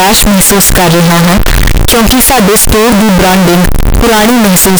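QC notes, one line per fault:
Throughout, float read as integer: harsh, near-square distortion at a high, almost fixed level with noise as loud as speech, likely 32-bit float samples decoded as 32-bit integers.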